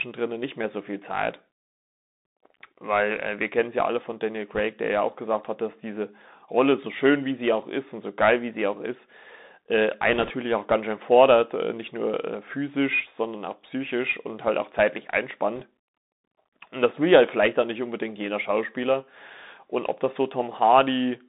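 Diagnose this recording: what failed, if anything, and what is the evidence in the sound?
The codec stage is at fault for the whole recording. The speech is squeezed into a telephone band of roughly 200 Hz to 3.7 kHz, with a grainy hiss beneath it and scratchy, roughened sibilants. That is the signature of the Bluetooth CVSD headset codec, which fits a 64 kbit/s stream of one-bit up/down steps. Loud high-frequency sounds outrun the adapting step size and smear. Unlike a frame-based narrowband codec, CVSD adds no warbly or metallic artefacts, just this slope-overload grit and granular noise.

The second fault is on the radio link: bit errors on a Bluetooth voice link, in three bursts. The first runs from 4.55 to 4.60 s, just before "der ja auch gesagt". The second, the longest, runs from 10.13 to 10.32 s, between "auch ist äh einen" and "auch ganz schön fordert". The third runs from 15.56 to 15.63 s, right after "und halt auch zeitlich". 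Each burst adds a brief rushing crackle, at an error rate of around one percent in the first and around one and a half percent in the second and third. There are no hard clicks or dropouts, which rules out packet loss, because each flipped CVSD bit nudges the waveform only slightly and its effect fades away.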